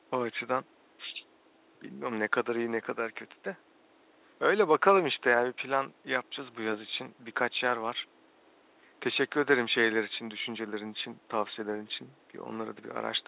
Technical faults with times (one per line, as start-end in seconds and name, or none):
none